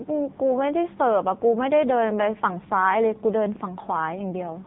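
Thin, boxed-in and noticeably buzzy from start to finish, the speech has a synthetic, metallic edge and no content above about 3.8 kHz. That is the signature of the AMR narrowband mobile codec (AMR-NB), which samples at 8 kHz and rebuilds the voice from a vocal-tract model excited by sparse pulses in 5 ms subframes. The heavy damage points to one of the lower modes, around 6.7 kbps, where too few pulses leave that buzz.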